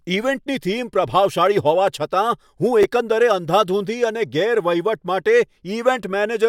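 At 2.81 to 2.84 s the speech briefly jumbles: chunks out of order, where a 10 ms chunk plays two chunks late, after the ones meant to follow it. There are three hard joins, but unlike a dropout or stutter, nothing is missing or repeated.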